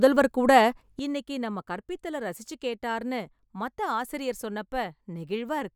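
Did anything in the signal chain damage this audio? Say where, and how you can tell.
Yes. A sudden gain jump at 0.99 s drops the speech by about 12 dB and holds there to the end. Unlike a fade or AGC, the level steps down within a single sample, and the background noise falls with it, likely a digital gain setting applied without a ramp.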